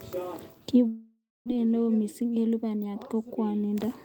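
A speech recording with two linked network faults. From 0.87 s to 1.50 s the sound stops arriving: the last fragment is stretched into a fading buzz, then about 270 ms of near-silence follows before speech resumes with roughly 400 ms of it simply gone. That pattern points to a long network dropout as the likely cause. A short packet-loss concealment glitch would smear only a few tens of milliseconds and never reach true silence. Right after, from 1.57 s to 3.15 s, the speech runs at about 110% of its normal rate while its pitch stays put. This is a jitter buffer speed-up, with the receiver trimming tiny pitch-period slices to shed the backlog left by the gap, about a fifth of a second in total. The unchanged pitch separates it from a sample-rate or clock mismatch, which would raise the pitch along with the speed.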